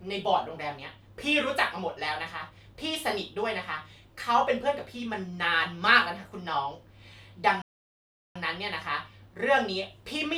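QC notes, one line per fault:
7.62–8.36 s, playback stall: the speech drops into silence mid-flow for about 0.74 s, then picks up again where it broke off. This is likely the player running short of data or its output thread being held up until it caught up.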